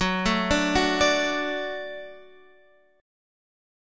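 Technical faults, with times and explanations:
No technical faults detected.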